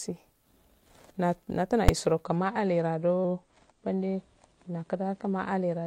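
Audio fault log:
1.89 s: invalid numbers at full scale. A 5 ms block of invalid values was pinned to maximum amplitude, heard as a single sharp bang.
2.24 s to end: adaptive stream at a lower bitrate. The quality drops abruptly with no gap, and nothing remains above 10.1 kHz. The dulled treble suggests a switch from about 96 to 32 kbit/s AAC.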